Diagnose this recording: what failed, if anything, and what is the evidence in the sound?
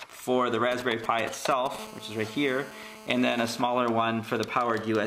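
GSM signalling bursts hit the analogue stage from 0.72 to 1.76 s: galloping ticks and short 217 Hz buzzes, roughly 10 dB under the sound, as a nearby 2G phone's radio pulses get rectified.

Then a steady GSM phone buzz runs from 1.79 to 3.6 s, a hard, raspy 217 Hz tone full of harmonics at about 18 dB down. The phone's now in a call, and the analogue wiring keeps demodulating every burst.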